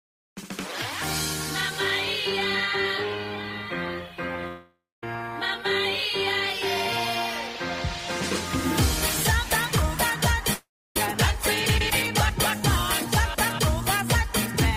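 At 4.47 s the sound breaks into a fading buzz that decays to silence for about 0.2 s before resuming at 5.03 s, and the same happens from 10.53 to 10.96 s, with about 0.29 s of silence. Both are likely a long network dropout: roughly 0.55 s and 0.42 s of audio never arrived, so the receiver stretched the last sound until it gave out. On a spectrogram, smeared, blurred bands fade into a blank gap; the waveform shows a tapering envelope, then flat line.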